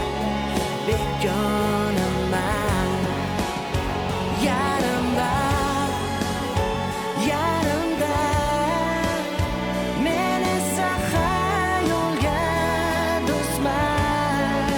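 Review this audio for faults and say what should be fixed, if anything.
No faults turn up in this audio, so nothing needs to be fixed.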